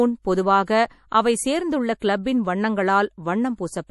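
Speech with MP3 compression damage throughout: nothing is present above 11.5 kHz, and the band below sounds watery and swirly as weak frequency lines drop in and out between frames, with smeared attacks. The likely cause is a low-bitrate MP3 encode, consistent with about 48 kbps.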